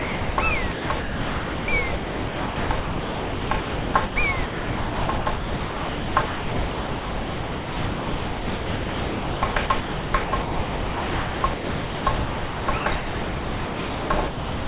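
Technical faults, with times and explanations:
0.00–0.38 s, sound dropped by the voice detector: the clip opens on 0.38 s of steady, even noise with none of the actual sound in it, and the real audio only starts at 0.38 s. The likely cause is the sender's voice activity detector classing this opening as background and pausing transmission, so the receiver generated comfort noise to fill the 380 ms gap until the detector triggered again.
0.72–1.68 s, 1.96–4.16 s and 4.46 s to the end, sound chopped by the voice detector: in each stretch the audio keeps breaking into holes of flat synthetic noise. About 0.86 s, 1.88 s and 8.84 s are replaced. Short bursts of genuine sound come through between the stretches. This is likely the sender's detector repeatedly switching transmission on and off, with comfort noise inserted for every unsent part. The whole clip is band-limited to nothing above 4 kHz, which fits G.711 mu-law at 64 kbps on the call path.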